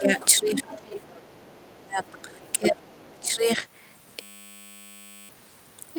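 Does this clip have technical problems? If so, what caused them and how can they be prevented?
Yes. Speech suppressed in double talk occurs from 0.0 to 0.19 s, 0.4 to 0.67 s and 1.27 to 3.65 s. The talker's level dips by about 10 dB in the first two spans and by around 30 dB in the long third one. The likely cause is an echo canceller that could not tell the talker apart from the loudspeaker echo while both sides spoke, so it turned everything down. Prevention: use a canceller with proper double-talk detection, or use a headset.

The other side's voice leaking through is heard at 0.19 to 0.26 s, 0.59 to 1.27 s, 2.04 to 2.22 s, 2.42 to 2.53 s and 3.23 to 3.34 s. It is a faint second voice roughly 20 to 35 dB below the talker. It likely comes from loudspeaker sound that the echo canceller failed to remove from the microphone. Room reverberation would only smear the talker's own voice, but this is a different voice. 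Prevention: lower the speaker volume or move the microphone away from it.

A system hang loop runs from 4.22 to 5.29 s. A 10 ms piece repeats over and over at 100 Hz, giving a steady buzz in place of about one second of speech. The computer or driver froze while the audio hardware kept replaying the same short stretch of its ring buffer. An underrun stutter sounds different, because it mixes gaps with fresh audio, while this buzz is one exact repeat. Prevention: fix the driver or system stall so the buffer keeps being refilled.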